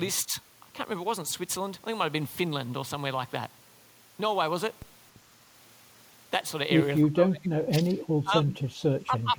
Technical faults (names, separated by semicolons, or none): speech suppressed in double talk